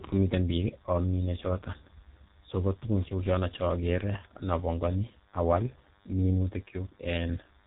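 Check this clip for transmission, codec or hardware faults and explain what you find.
Two faults run through the whole recording: a DECT cordless phone buzz under the speech, and heavy G.723.1 codec damage on the speech itself.

The DECT cordless phone buzz is present from start to end. A nearby DECT handset or base transmits a radio burst every 10 ms, and the audio circuitry rectifies it. The result is a thin, steady 100 Hz buzz rich in harmonics, sitting about 35 dB below the speech.

The G.723.1 codec damage is also continuous and severe. Nothing passes above 3.8 kHz, and the sound is consistent with a low bitrate around 6 kbit/s. Long 30 ms frames and a slowly updated voice model leave the speech muffled and hoarse, with smeared consonants.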